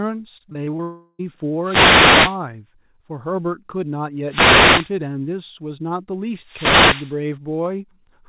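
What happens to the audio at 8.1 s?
At 8.1 s the speech is intact, with no fault, only the narrowband sound of the call path, which carries nothing above 4 kHz.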